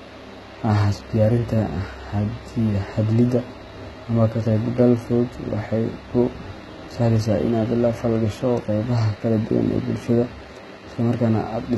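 From start to finish, the speech carries heavy codec damage. Its likely cause is HE-AAC compression at a low rate, which fits a bitrate around 16 kbps. Only the lower spectrum is truly coded. The treble is rebuilt by copying lower bands upward under a coarse envelope. That top end is not the original, and nothing reaches above 11.8 kHz. Harmonics do not line up across the join. S sounds come out gritty, metallic or lispy.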